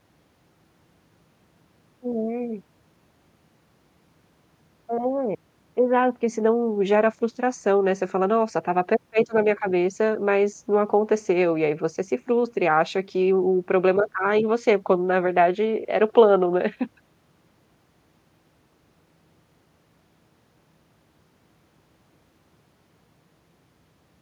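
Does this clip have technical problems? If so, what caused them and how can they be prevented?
No, there are no technical problems in this clip.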